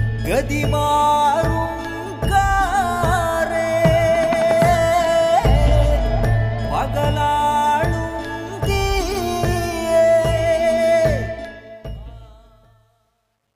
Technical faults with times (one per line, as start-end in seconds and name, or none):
11.23-13.55 truncation distortion on a fade